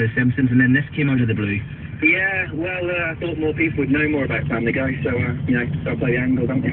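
Nothing goes wrong anywhere in this audio; there are no technical faults to point out.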